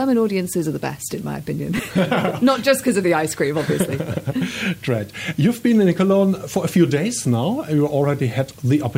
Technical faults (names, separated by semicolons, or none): low bit depth with dither; lost LE Audio frames